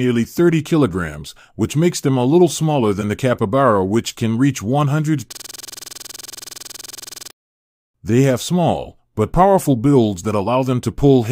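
From 5.33 to 7.31 s the sound freezes into a rapid, rattling stutter: one 46 ms fragment repeats about 43 times at 21.5 Hz. This is a system hang loop. The system stalled while the audio hardware kept replaying its ring buffer, which fits a 2048-sample buffer.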